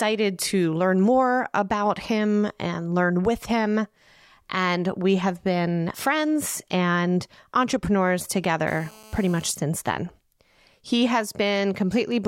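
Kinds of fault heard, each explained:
GSM phone buzz: a nearby 2G handset transmitting in bursts about 217 times a second induces radio pulses that the audio circuitry rectifies into a harsh, raspy 217 Hz buzz rich in harmonics. It appears from 8.68 to 9.51 s, after "been friends and entrepreneurs" and before "since then", held steady as during a call, about 24 dB below the speech. Unlike mains hum, which is a smoother 50 or 60 Hz tone, this buzz is gritty and pulse-like.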